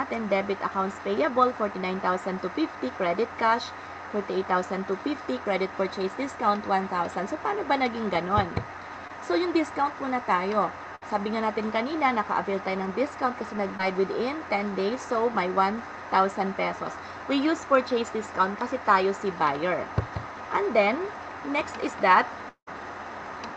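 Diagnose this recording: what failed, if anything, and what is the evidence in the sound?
Short concealed packet loss at the network stage: brief smears at 9.07–9.11 s and 13.77–13.81 s, each about 20 ms, where the decoder extrapolated the last sound. Too short to fade, unlike a burst.

Burst of packet loss, network: at 10.95–11.03 s, about 60 ms went missing and was bridged by a held, decaying continuation of the preceding sound before playback resumed further on.

At 22.49–22.69 s, about 180 ms is missing. A fading continuation gives way to roughly 90 ms of silence, which points to a long network dropout, likely the cause, rather than a concealed burst.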